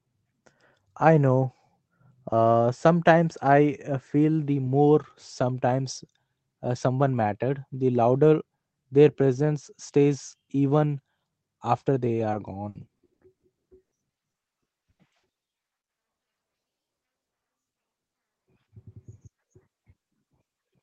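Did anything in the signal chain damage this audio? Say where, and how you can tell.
Yes. The damage is at the network stage of a call: packets of this speech were lost in transit and the receiver's concealment covered the holes. The audio passed through a call codec whose roughly 8 kHz upper limit and coding texture point to Opus at around 24 kbps.

Repeated packet loss (robotic sound) runs from 12.19 to 17.47 s. Dozens of gaps, the longest 100 ms, total about 1.3 s, so roughly a quarter of that stretch is patched rather than real. Each hole is filled by extending the preceding sound, and the next hole follows soon after. The result is choppy, with pieces missing. On a spectrogram the harmonics turn into flat, repeated stripes interrupted by seams. The waveform shows frequent envelope breaks.

Short concealed packet loss occurs at about 17.93 to 17.99 s, where roughly 40 ms never arrived in time. 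The decoder bridged it by continuing the last pitch or noise shape and then crossfading back into real signal. It is heard as a brief smear or wobble. On a spectrogram it shows as a thin column of smoothed, too-regular energy. The waveform blends smoothly at the rejoin.

A burst of packet loss follows almost immediately, from 18.07 to 18.15 s, with about 60 ms gone. The concealment held the last sound and turned it down as the gap continued, so a voiced sound becomes a decaying buzz, or an unvoiced one a fading hiss, before the audio resumes further along. On a spectrogram this is a frozen, dimming patch. The waveform shows a tapering envelope that then jumps abruptly.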